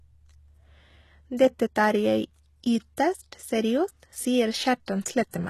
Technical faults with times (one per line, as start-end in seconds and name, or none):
0.00-5.50 HE-AAC compression
4.86 pre-echo